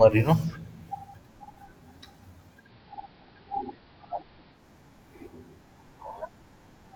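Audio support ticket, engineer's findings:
Digital radio blending to analogue, 2.57 to 4.65 s. Receiver lost the digital stream and cross-faded over about 0.16 s to the station's AM analogue feed, then back. Symptom: faint hiss about 35 dB below the speech, level unchanged across both blends. Component: hybrid tuner's digital-to-analogue blend logic, triggered by a reception dropout.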